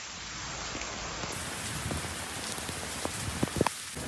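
From 1.32 s to the end, a wrong sample rate runs everything 1.5 times fast and about 7 semitones high, consistent with 16 kHz audio played back at 24 kHz.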